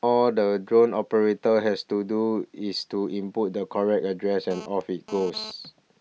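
From 4.51 to 5.51 s a GSM phone buzz sits about 16 dB under the speech: a harsh, raspy rasp pulsing at 217 Hz from a nearby 2G handset's bursts during a data transfer, rectified by the audio circuit. Unlike mains hum, it comes and goes with the data transfer.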